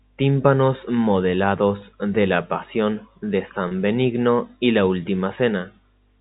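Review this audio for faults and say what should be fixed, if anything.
A brief held, buzzy sound at 1.81 s, just before "de la pasión de", recurs from 3.68 to 3.71 s, right after "de la pasión de". This is packet loss with pitch repetition: the receiver repeated the last pitch period to bridge gaps of 10 ms and 30 ms, which fits one and then three lost packets. To prevent it, fix the network path's packet loss or add forward error correction and a deeper jitter buffer.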